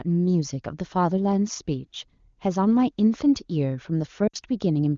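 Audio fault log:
4.28–4.36 s, lost AMR speech frames: an 86 ms stretch of speech near the end drops to near silence within two frames, then the voice returns weak or rough for a moment. The decoder filled the gap by repeating the last good pitch and vocal tract settings at falling gain. About 60 ms of concealed audio fits three 20 ms frames. Because the stream is AMR wideband, the concealed sound fades faster than it would in narrowband.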